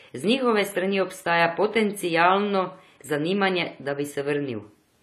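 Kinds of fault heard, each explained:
AAC compression: For the whole clip the speech sounds dull and smeared, with a warbling, fizzy texture on sustained sounds and sibilants, and nothing above 13.8 kHz. The likely cause is an AAC-LC encode at a low bitrate, around 32 kbps. The coder quantises each frame's spectrum coarsely, lowers the cut-off and leaves holes that come and go. A simple low-pass filter would remove the top cleanly, without this unstable, swirling grain in the remaining bands.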